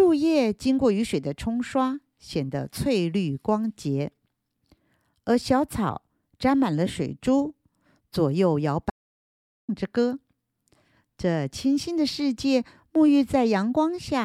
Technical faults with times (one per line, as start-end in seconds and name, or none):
8.90-9.69 audio dropout to silence